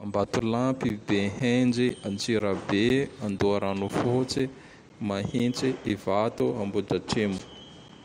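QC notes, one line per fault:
0.39–7.89 s, periodic USB or driver dropouts: roughly every 0.5 s, about 10 ms of speech drops to silence as the bus or driver briefly stalls, giving about fifteen evenly spaced ticks; the waveform shows flat gaps, the spectrogram thin vertical clicks.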